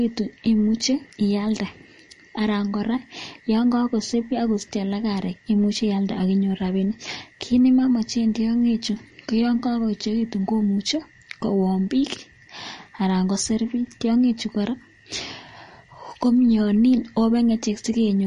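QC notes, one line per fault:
Throughout: MP3 compression, likely at a low bitrate near 40 kbps, removes all content above 10.6 kHz and drops weak lines, so the speech sounds dull and watery.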